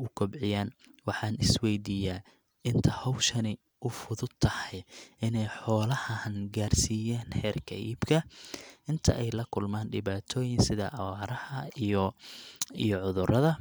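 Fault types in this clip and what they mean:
No faults detected in this speech recording.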